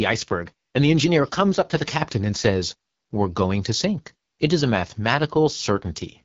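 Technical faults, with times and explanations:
Throughout, AMR wideband (HD Voice) codec: the speech sounds rough and raspy, with nothing above 7.4 kHz. The pulse-excited vocal tract model, starved of bits at what sounds like the 8.85 kbit/s rate, smears detail, and the top band is synthetic noise.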